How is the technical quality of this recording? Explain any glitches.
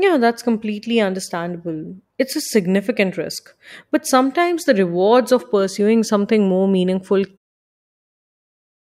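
The technical quality of this speech recording is good, and there are no glitches to explain.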